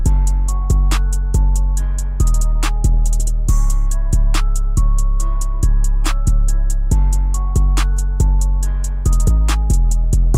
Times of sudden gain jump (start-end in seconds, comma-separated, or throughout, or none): none